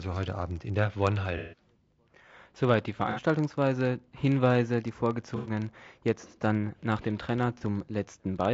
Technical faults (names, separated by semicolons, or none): filter restarted on every block; low-delay AAC compression; AAC frame loss with concealment